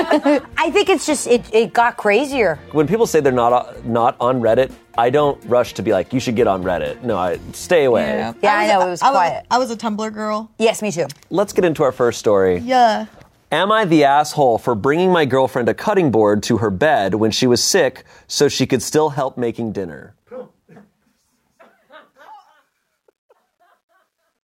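From 18.93 s the fade-out carries truncation distortion: the level stage keeps only 11 bits with no dither, so the tail turns gritty, and from 21.98 s to 24.47 s it is at its worst, the waveform reduced to a few square steps, unlike the steady hiss of noise.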